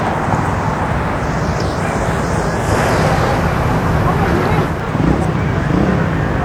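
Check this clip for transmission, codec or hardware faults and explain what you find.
One transmission fault is present. From 2.56 s to 4.85 s, digital radio blending to analogue occurs. The receiver lost its digital stream and cross-faded over about 215 ms to the FM broadcast, then back. Level shifts about 3 dB, and faint hiss rises.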